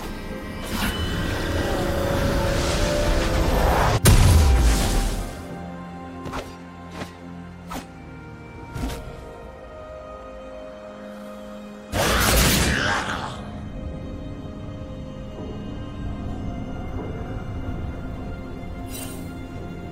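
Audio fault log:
No faults heard anywhere in this audio.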